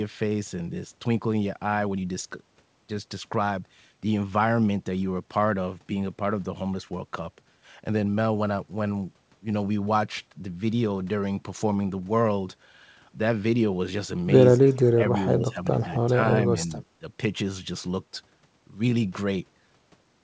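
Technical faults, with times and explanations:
14.53–15.18, 15.34–15.67, 15.83–16.32 and 16.50–16.71 s, speech suppressed in double talk: the speech dips in chunks, about 30 dB at first, then shallower. The waveform shows notched gaps, likely from echo-canceller suppression.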